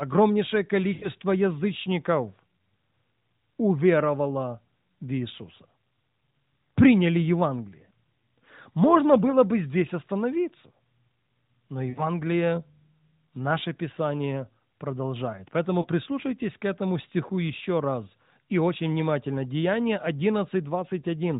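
A brief drawn-out warble fading toward silence at 0.94–1.08 s (80 ms), 11.90–12.08 s (60 ms) and 15.82–15.86 s: lost AMR speech frames, where the decoder padded corrupted frames with the last good pitch and vocal tract settings at falling gain.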